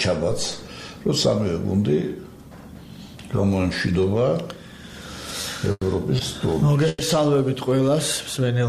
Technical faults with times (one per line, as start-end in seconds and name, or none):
5.41-5.45 short stall from a late packet
5.71-5.83 call audio freeze
6.88-7.02 call audio freeze